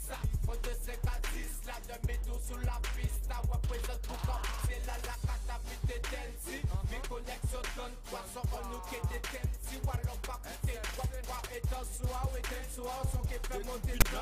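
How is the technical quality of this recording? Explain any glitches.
One glitch: a short burst of static right at the end.

File tags played as audio, at 14.01 s: text tags were decoded as samples, giving a brief hard-edged rasp offset to one side.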